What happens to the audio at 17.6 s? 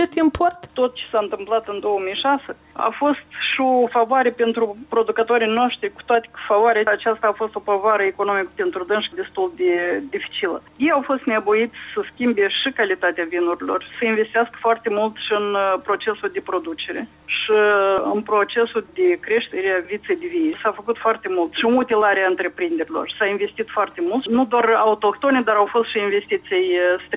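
Nothing goes wrong at 17.6 s; the audio plays through that moment intact, with no dropout, click, glitch or other fault to be heard.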